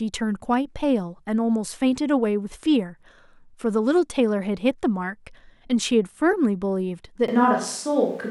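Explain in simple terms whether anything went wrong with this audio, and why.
Near the end, at 7.28 s, the recording likely switches to a distant microphone, so the close microphone's signal drops out. From there to the end the speech turns suddenly roomy and hollow, with thinner bass and faint background noise, though the loudness stays about the same.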